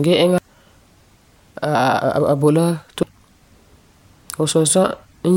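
Damaged data in a compressed stream shows up twice in this speech clip, as short glitches at 0.38 s and 3.03 s. At each point part of the compressed data is corrupt, so the decoder misreads or discards the affected frame, loses its place in the stream and has to hunt for the next valid frame header before decoding can resume. That momentary breakdown is heard as a brief chirp or blip cutting into the speech.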